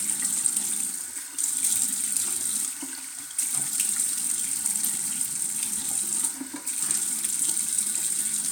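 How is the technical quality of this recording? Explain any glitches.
No glitches are audible; the recording holds steady throughout.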